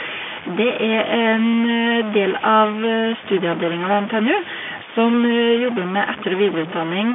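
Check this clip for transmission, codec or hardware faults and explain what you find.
Two faults run through this speech clip, carried over an ordinary G.711 telephone path whose sound is band-limited to roughly 150 Hz to 3.5 kHz.

Stuck bit, throughout: a single data bit is frozen at one value, most likely from a broken data line or converter. About half the samples land off by that bit's weight, so the speech gains distortion, and the pauses fill with noise.

Clock drift buffer slips, from 0.34 s to 6.94 s: the sending and receiving devices likely run on separate clocks about 300 parts per million apart. The buffer between them drifts until it drops or repeats a few samples. That happens every 0.6 s, around ten times, and each slip is heard as a regular click while speech is present.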